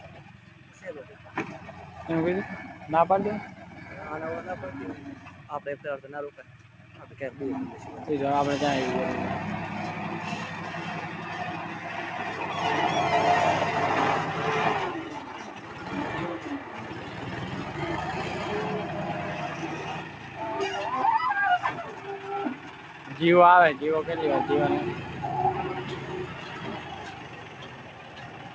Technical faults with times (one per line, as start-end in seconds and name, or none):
0.00-28.54 noise suppressor applied to music or sounds
0.24-1.29 sound cut by the noise suppressor
5.15-5.49 sound cut by the noise suppressor
6.37-7.17 sound cut by the noise suppressor
15.39-17.21 sound cut by the noise suppressor
19.49-20.39 sound cut by the noise suppressor
21.89-23.15 sound cut by the noise suppressor
26.29-28.54 sound cut by the noise suppressor